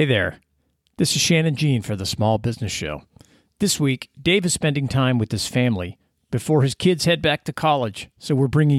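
No technical faults can be heard anywhere in this speech recording. There are no events to place in time, so there is nothing further to describe.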